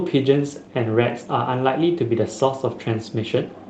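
Nothing's actually wrong here: it's speech carried over an ordinary call link, and the top end tapering off around 12 kHz is just what you'd expect from a call codec like Opus running at that bandwidth.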